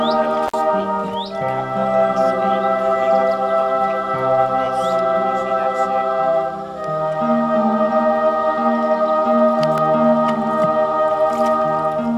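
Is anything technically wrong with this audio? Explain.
Yes, there are two faults.

At 0.47 to 0.54 s there is an intermittent contact: a loose connection in the cable or plug opens for about 50 ms. The sound drops out abruptly, with crackle at the edges and faint hiss while the line is broken.

At 9.78 s a block of digital silence replaces the audio for 2 ms. The samples were zeroed, most likely because the output buffer was not filled in time, and the hard cut in and out makes a single short click or tick.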